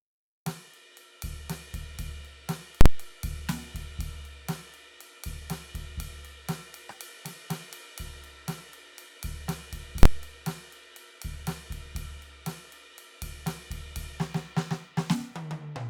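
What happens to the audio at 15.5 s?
Nothing goes wrong at 15.5 s; the music plays through that moment intact, with no dropout, click or distortion.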